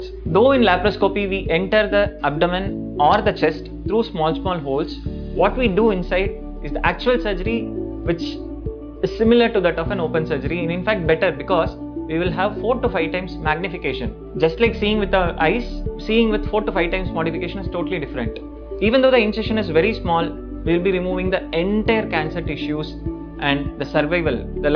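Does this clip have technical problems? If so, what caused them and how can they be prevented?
No, there are no technical problems to report here.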